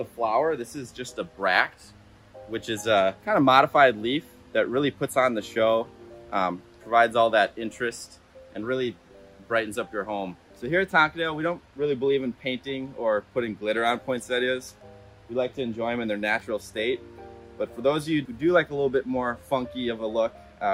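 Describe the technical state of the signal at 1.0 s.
At 1.0 s the signal is intact, with no audible technical fault at that point.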